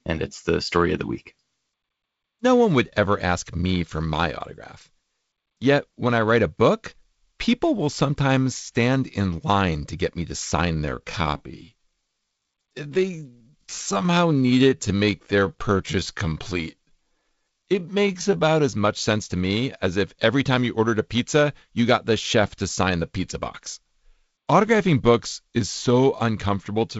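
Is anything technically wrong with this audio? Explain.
Yes. From 10.67 to 18.59 s, after "to get me to" and until "as much sense to", there is a time-stretched section. Software likely stretched this stretch of speech to about 0.72 times its original speed, keeping pitch by repeating short pieces, so the pace slows abruptly and the speech drags.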